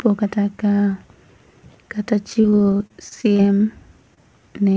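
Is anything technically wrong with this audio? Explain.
Yes, there are two packet-loss faults in this speech clip, which passed through a call codec with nothing above 8 kHz.

From 2.30 to 3.55 s there is repeated packet loss, heard as robotic sound. About a dozen short holes open in quick succession, the longest about 34 ms. The receiver patches each one by extending the preceding sound, so about a fifth of the stretch is synthesised. The speech turns choppy, with pieces missing. On a spectrogram, harmonics smear into flat, repeated bands, and the waveform shows recurring short, over-regular segments.

Between 4.14 and 4.19 s, a short concealed packet loss drops roughly 20 ms of audio. The decoder fills the hole by continuing the last sound, using its pitch if voiced and shaped noise otherwise, then crossfades back into the real signal. It is heard as a brief smear or wobble. On a spectrogram it appears as a thin column where detail freezes or blurs, and the waveform shows a short, slightly too-uniform patch.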